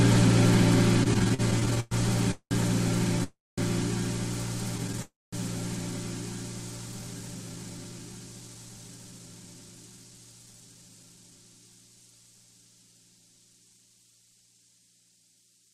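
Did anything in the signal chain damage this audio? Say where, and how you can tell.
Yes. Repeated stalls (stutter) occur at the network and jitter buffer stage, from 1.03 to 1.94 s (twelve gaps, longest 112 ms) and 4.78 to 5.01 s. Late packets kept draining the buffer, so the receiver stretched the last sound.

Call audio freezes occur at 2.31, 3.24 and 5.02 s, lasting 196, 340 and 302 ms. Each is a fading continuation that decays into silence, then resumes where it stopped. The likely cause is packets held up in transit.

A jitter buffer speed-up runs from 6.86 to 11.39 s. The audio plays at 113% with unchanged pitch, as the receiver trims pitch-period slices, roughly 0.7 s in total, to shed excess delay.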